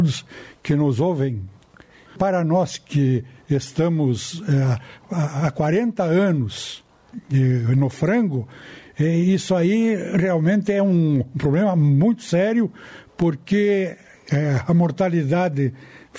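Gain pumping runs through the whole clip, likely from input gain set far too high with a fast limiter pulling it back on each loud sound. The gain swings by roughly 15 dB, leaving the sound squashed and flattened, with the call processing leaving nothing above about 8 kHz.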